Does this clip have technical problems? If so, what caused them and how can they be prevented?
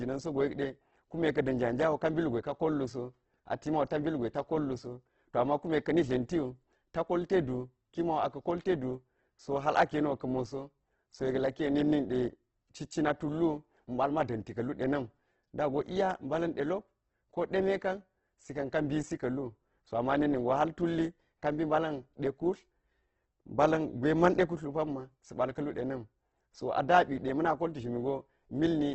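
Yes, there's heavy Opus compression throughout the whole clip. Nothing survives above 8.2 kHz, and the starved bands get filled with folded or noisy content, so the speech sounds grainy and rough. That points to roughly 12 kbps, likely in music mode. Encoding at a higher bitrate would prevent it.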